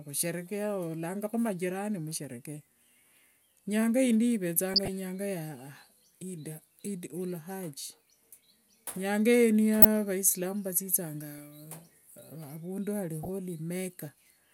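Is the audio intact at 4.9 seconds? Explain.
Yes, but only just. DAB burbling runs from 4.74 to 4.88 s and stops about 20 ms before that point. Weak reception lets bit errors slip past the error correction into the MP2 data. Corrupted samples put short noise blips into single sub-bands, and corrupted scale factors make sub-bands jump in level for up to a frame. Nine frames were hit, with an error rate of roughly 0.2 percent. It sounds like burbling noise blips over the speech.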